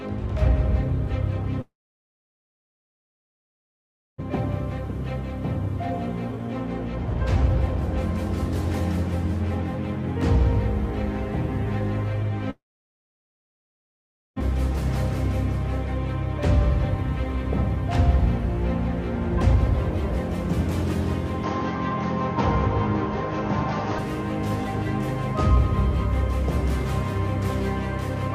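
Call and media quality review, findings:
Long network dropout, 1.61–4.22 s and 12.50–14.42 s. Brief fading concealment buzz, then near-silence for about 2.5 s and 1.8 s. Likely packet loss on the network path. 1.6 s of audio missing each time; playout delay shifts by roughly 1 s and 0.3 s.

Jitter buffer speed-up, 4.30–8.29 s, right after the first dropout. Playback runs at 103% with pitch unchanged. Receiver trimming pitch-period segments to drain buffered backlog, about a tenth of a second removed in total.

Input switched to a poorer device, 21.43–23.99 s. Abrupt change to a duller, band-limited tone with nothing above 6.6 kHz and a new noise floor about 45 dB below signal. No gap at the switch, no clear level change. Likely capture moved to a headset or secondary mic.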